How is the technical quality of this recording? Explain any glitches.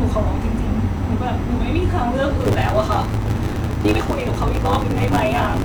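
The recording has two distinct faults, one brief and one that lasts from its onset to the end.

At 0.93 to 0.98 s there is damaged data in the compressed stream. The decoder hits corrupted frames, loses sync and skips to the next valid header, producing a short glitch.

From 2.39 s to the end there is a block size mismatch with truncation. One stage writes longer blocks than the next reads, so each block's tail is discarded, which fits 512-sample writes. This leaves a steady 100 Hz buzz and speech running 1.16 times faster while keeping its timbre, unlike a sample-rate error, which would shift the timbre too.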